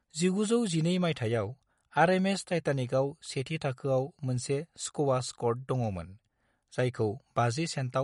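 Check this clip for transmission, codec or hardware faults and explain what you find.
One codec fault runs through the whole recording: MP3 compression. From start to finish the speech sounds watery and swirly, with s sounds turning metallic and consonant attacks smeared, and nothing survives above 11.2 kHz. The likely cause is an MP3 encoder starved of bits, consistent with a bitrate around 48 kbps. Short of data, it cuts the treble at a fixed frequency and zeroes quieter spectral lines, which then flicker in and out between frames.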